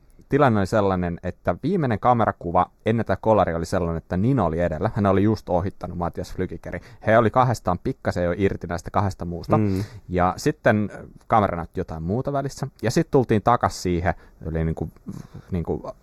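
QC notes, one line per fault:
Throughout: channel delay (comb filtering). One channel trails the other by a fraction of a millisecond; the mono sum cancels near 3 kHz and its odd multiples, so the speech sounds hollow and phasey.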